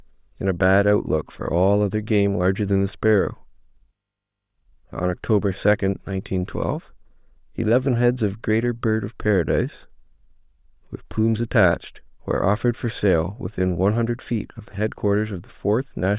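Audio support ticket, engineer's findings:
No fault found on the speech clip. Listened through in full, nothing to report.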